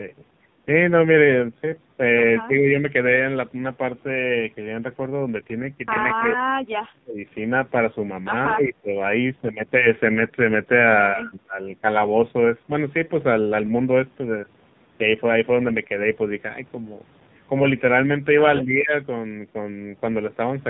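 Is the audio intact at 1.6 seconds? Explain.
No. At 1.6 seconds the speech sounds buzzy and synthetic, with nothing above 4 kHz, and that quality runs through the whole clip. This is the AMR narrowband mobile codec. It samples at 8 kHz and rebuilds the voice from a vocal-tract model excited by a few pulses per 5 ms subframe. The heavy, robotic damage points to a very low bitrate, around 5.9 kbps.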